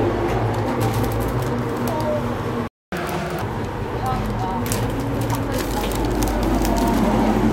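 A playback stall cuts the audio from 2.68 to 2.92 s, a silent gap of about 250 ms. The player most likely ran short of buffered data or had its output thread blocked, so the sound halts abruptly mid-flow before resuming where it left off.

Catch-up at higher speed follows from 2.92 to 3.42 s. The player resamples its backlog at 1.5 times normal rate to recover the lost time, so the sound runs noticeably faster and rises roughly seven semitones in pitch before snapping back to normal.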